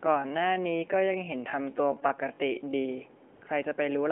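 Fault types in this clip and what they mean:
time-stretched section: From the start to 2.88 s, the speech runs slowed to about 0.65 times its natural pace, yet the pitch stays where it was. Short pieces of sound are repeated to fill the extra length. That leaves the section with a dragging rhythm. At 2.88 s the pace snaps back to normal. The likely cause is software stretching this part to fit a set length.
AMR comfort noise: From 3.35 to 3.41 s, for about 60 ms, the real background drops out. A steady, smooth synthetic hiss takes its place, then switches off again. The phone judged the talker silent and stopped sending speech frames. The receiver filled the gap with noise built from a rough sketch of level and spectrum. Within the narrow phone band, which tops out near 3.4 kHz, the swap is brief but heard as a sudden change in texture.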